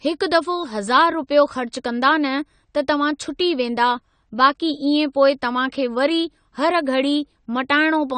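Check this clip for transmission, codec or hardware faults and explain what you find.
One fault runs through the whole speech clip: AAC compression. From start to finish the spectrum stops dead at 9 kHz, and the sound is dull and smeared, with a fizzy, warbling edge on sibilants and held vowels. The likely cause is a low-bitrate AAC-LC encode, which fits something around 32 kbps. Too few bits remain to code every frequency line, so the encoder discards the top band and leaves other bands patchy. On a spectrogram this appears as a flat ceiling at 9 kHz with blotchy holes below it, while the waveform looks ordinary.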